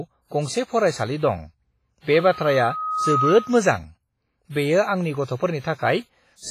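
Throughout the speech there is heavy coding damage, likely from WMA compression at a low bitrate, around 24 kbps. Long transform blocks smear noise around each sound, leaving a washy, ringing hiss that breathes with the signal. Nothing remains above 15.4 kHz.

From 2.13 to 3.72 s a loudspeaker feedback squeal appears: a single 1.3 kHz tone swelling over about a second until it sits roughly level with the speech. Unlike a steady interfering tone, it grows on its own as the mic-to-speaker loop exceeds unity gain.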